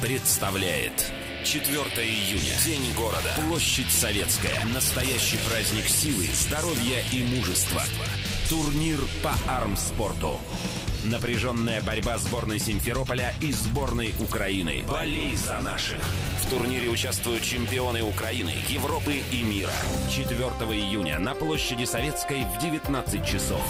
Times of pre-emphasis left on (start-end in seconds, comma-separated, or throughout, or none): 0.00-9.40